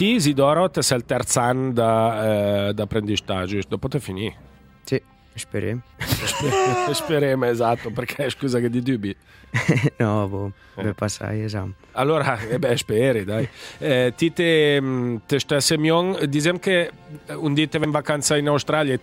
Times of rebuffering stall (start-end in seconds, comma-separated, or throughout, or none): none